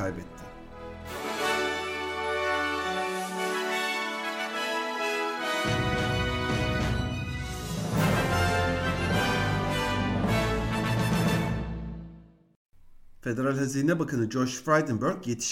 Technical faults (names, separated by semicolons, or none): none